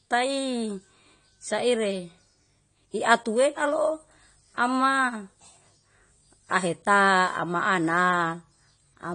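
Throughout, likely AAC compression, fitting a bitrate around 32 kbps, removes everything above 9.6 kHz, leaving the speech dull, smeared and plainly codec-damaged.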